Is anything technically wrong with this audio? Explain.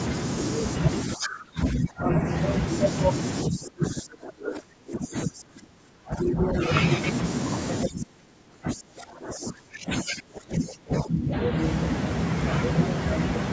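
Yes. From 1.05 to 2.22 s, 3.45 to 6.6 s and 7.85 to 11.34 s, the speech dips sharply, by roughly 25 dB at worst. This is likely speech suppressed in double talk. The echo canceller mistook overlapping talk for echo and turned it down.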